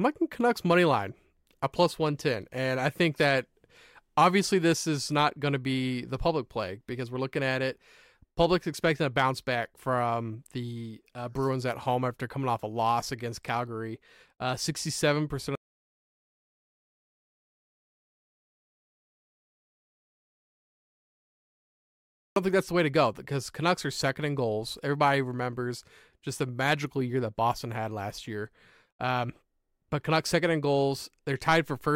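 The input to the recorder was likely lost, through a disconnected device, failed link or mute, while writing continued, giving an audio dropout to silence from 15.55 to 22.36 s. For 6.8 s the speech stops dead into silence with no room tone left, returning at "think that's the way".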